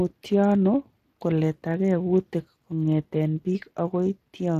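From start to finish the speech sounds noisy and hoarse, with a grainy, buzzy edge clinging to it, and nothing is heard above about 15.2 kHz. This is Speex codec damage: a CELP coder models the voice and spends its limited bits describing the excitation, so detail the budget cannot carry becomes rough noise. The roughness is plainly audible and fits a Speex stream of roughly 22 kbps.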